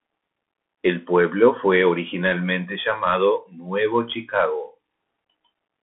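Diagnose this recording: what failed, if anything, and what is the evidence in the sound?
The codec stage failed: the speech passes through a Bluetooth CVSD headset codec from start to end. The band is held to about 200 Hz to 3.4 kHz, s sounds turn scratchy, and granular hiss sits under the speech. That hiss sets it apart from a clean narrowband telephone line. It fits a one-bit, 64 kbit/s stream whose adaptive step size lags behind sharp high-frequency energy.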